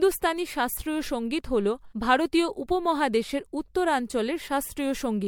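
Throughout, the speech sounds swirly, hollow and smeared, with blurred consonant attacks and nothing above 19.8 kHz. This is generation loss, likely from around seven MP3 re-encodes, each on a shifted frame grid, stacking quantisation noise and spectral holes beyond what a single pass would leave.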